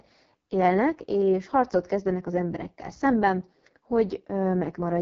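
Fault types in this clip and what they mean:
AMR wideband (HD Voice) codec: The speech has passed through the AMR-WB mobile codec, which models the vocal tract and drives it with pulses up to 6.4 kHz, then fills the band above with shaped noise. Here the damage is heavy throughout: the speech sounds rough and raspy, and the heavy coarseness points to the lowest mode, around 6.6 kbit/s. Nothing is present above 7.4 kHz, so the top end stops abruptly.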